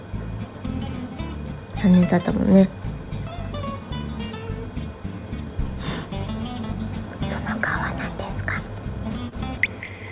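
Audio carried over a call path with nothing above 4 kHz, where short concealed packet loss between 9.29 and 9.35 s leaves a brief smear: the receiver extrapolated about 25 ms over the gap, showing as a blurred, repeated-looking patch on a spectrogram.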